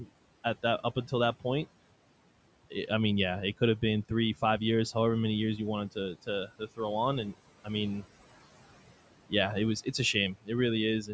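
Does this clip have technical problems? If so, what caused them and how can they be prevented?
Yes. Noise suppressor artifacts run throughout: the room noise sinks by about 17 dB between phrases and rises again under the speech. That pumping, warbling residue sets it apart from steady background hiss. Gentler suppression strength would prevent it.

Speech cut by the noise suppressor occurs at 0.00–0.12 s, 6.47–6.79 s and 10.34–10.50 s. Each time, roughly a tenth of a second of speech falls by about 19, 16 and 17 dB. It sounds faded and swallowed rather than abruptly silent, which distinguishes it from a dropout. A lower suppression threshold would prevent it.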